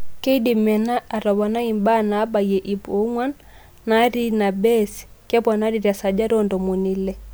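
No technical faults are audible.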